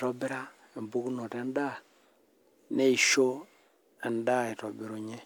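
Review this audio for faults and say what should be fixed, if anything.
Nothing here needs fixing; I can't pick out any technical fault anywhere in the speech.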